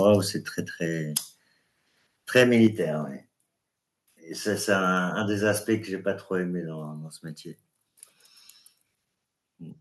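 At 1.02 s the speech drops in level by about 2 dB in one step, the microphone volume stepped down, likely by the call software lowering the input gain. The waveform envelope shrinks abruptly, and the spectrogram shows a uniform darkening across all frequencies.

From 2.36 to 2.67 s the loudest syllables sound harsh and crackly. This is microphone overload, with peaks around 4 dB beyond the converter's limit, likely from excessive input volume. The waveform shows flat-topped peaks on about one percent of samples, and the spectrogram shows bright vertical smears of added high harmonics.

Right after, at 2.67 s, a second microphone volume step-down cuts the level by about 5 dB, likely the software reacting to that overload. The waveform shows a sudden smaller envelope, and the spectrogram shows a further uniform dimming across frequencies.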